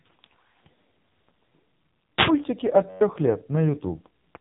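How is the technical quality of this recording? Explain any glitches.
The recording has two problems: heavy narrowband codec damage across the whole clip, and a brief hang loop near the end.

The AMR narrowband mobile codec runs throughout. Nothing above 3.8 kHz survives, and the speech sounds buzzy and synthetic. The codec rebuilds the voice from a vocal-tract model excited by a few pulses per subframe, and at a low mode this degradation points to roughly 5.9 kbps. A plain low-pass filter would only muffle the sound. Here the voice itself is restructured, giving the mechanical buzz.

A system hang loop occurs from 2.89 to 3.01 s. The playback system froze while the audio hardware kept cycling one ring buffer. A 10.67 ms slice repeats about eleven times, which fits a 512-sample buffer. The repetition is heard as a steady buzz at 93.8 Hz, and about a tenth of a second of speech is lost. A dropout would leave silence, and a stutter would jump back in longer, uneven chunks. 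This fault is one tiny identical slice repeating at a fixed rate.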